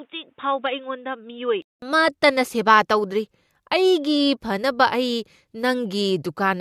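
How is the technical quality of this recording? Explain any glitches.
The recording has one clear fault: its opening section sounds as though the input was switched to a poorer device. From 0.0 to 1.82 s the speech is band-limited, with nothing above 3.8 kHz, so it sounds dull and boxy, sits roughly 10 dB lower, and carries a different noise floor about 45 dB below the signal. The likely cause is a lower-grade microphone or a headset call profile. At 1.82 s a 200 ms silence marks the switch, and fuller-bandwidth sound returns with "ꯑꯃꯠꯇꯅ ꯁꯦꯕ ꯇꯧꯗꯔꯤ".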